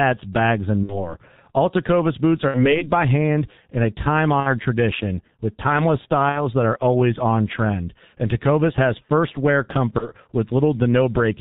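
The speech sounds muffled and hoarse throughout, with smeared consonants and nothing above 4 kHz. This is heavy G.723.1 codec damage. At about 6.3 kbit/s this early internet-telephony codec keeps a coarse model of the voice in 30 ms frames and updates it slowly, so fast articulation blurs and the top of the spectrum is cut away.

Five times the voice briefly stretches into a buzzy tone or coloured noise that fades, and then returns weak or distorted. This is VoIP packet loss concealed by the speech codec. The events are at 0.83–1.15 s, at 2.49–2.84 s between "boots are" and "by hand in a", at 4.40–4.56 s between "hand in a time" and "tradition with timeless", at 6.30–6.41 s, and at 9.98–10.08 s just after "has first wear". The first four gaps fit two lost 30 ms frames each, and the last fits one. During each gap the decoder carries forward its last pitch and filter with falling gain. Because each frame builds on the one before, the damage lingers after the stream resumes.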